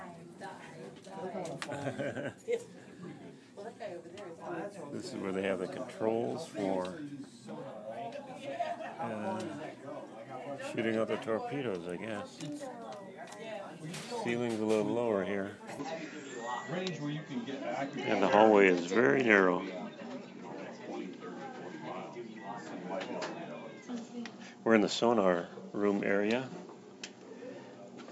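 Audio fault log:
15.79–28.11 s, input switched to a poorer device: sound abruptly dulls, nothing above 7.6 kHz, level shifts about 5 dB, new background noise appears; likely a different, narrower-band microphone.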